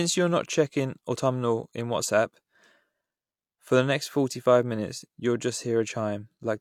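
No technical faults can be heard at any point in the recording.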